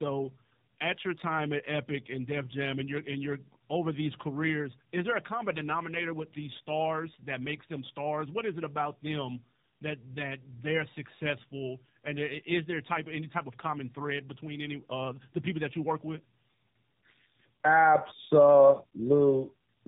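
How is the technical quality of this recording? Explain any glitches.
The recording is degraded by one fault that runs through the whole speech clip.

Tandem speech coding, from start to finish: the call seems to have been decoded and re-encoded across links. The sound points to two low-rate speech codecs in series, such as G.729A then AMR-NB, with a G.711 hop between them. Each coder compounds the last one's damage, leaving speech rough, muffled and warbly, with nothing above 3.8 kHz.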